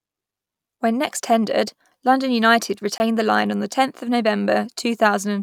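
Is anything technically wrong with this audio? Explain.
Yes. At 2.98 to 3.00 s, just before "the line on the", this speech clip has a block of digital silence: for 20 ms the signal drops to silence, most likely because the output buffer was not filled in time. The hard switch to nothing and back is heard as a brief hole. Unlike a fade or level dip, nothing remains inside the gap, not even background noise.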